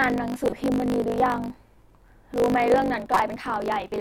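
A block size mismatch (truncated) runs through the whole clip. One stage writes longer blocks than the next reads, so each block's tail is dropped, which fits 1024-sample writes. This causes a 50 Hz buzz and speech running 1.07 times fast at roughly normal pitch.

A corrupt frame decoded appears from 0.47 to 0.58 s and again from 3.13 to 3.20 s. Each time, damaged bits in a few compressed frames were decoded as if valid, placing energy at wrong frequencies and producing a brief chirpy, noisy burst.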